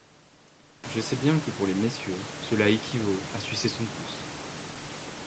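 Nothing here counts as a fault: the room noise swells by about 18 dB around a second in but stays roughly 14 dB under the speech, and the call path tops out at 8 kHz, as expected for this kind of connection.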